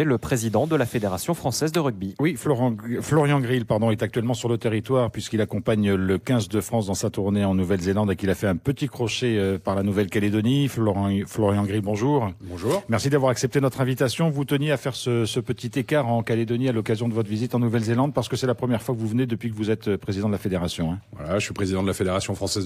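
No technical faults are audible.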